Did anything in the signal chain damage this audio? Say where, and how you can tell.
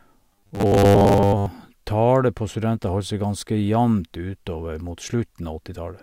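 Yes. From 0.33 to 1.47 s, just before "tallet på studenter", the speech becomes a metallic buzz locked at 100 Hz. This is robotic sound from repeated short buffers at the buffer stage, likely a starved buffer replaying 10 ms chunks over about 70% of that span. The fixed pitch distinguishes it from wandering codec warble.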